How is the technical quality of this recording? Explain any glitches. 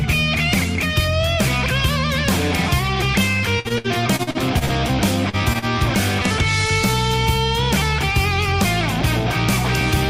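The recording is disrupted by network transmission faults, all between 3.59 and 5.65 s.

From 3.59 to 4.72 s the sound turns choppy, with small pieces dropping out. This is repeated packet loss. Eight separate gaps occurred in just over a second, the longest about 59 ms. Each was covered by extending the preceding sound, so roughly a quarter of the stretch is synthetic fill, while about 200 ms of real audio never arrived.

At 5.29 to 5.36 s a brief smear interrupts the sound. This is short concealed packet loss. Around 40 ms of audio failed to reach the decoder, and the receiver bridged the hole with about 37 ms of continuation built from whatever preceded it before blending back in. A short sound in that window may be lost entirely.

Immediately afterwards come two quick holds, at 5.53 to 5.58 s and 5.59 to 5.65 s, where the sound lingers slightly too long. These are short stalls from a late packet. 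The jitter buffer ran dry while waiting, so the last sound was stretched by about 17 ms and then 35 ms until the packets arrived. Playback resumed where it left off, so nothing is missing, only delayed.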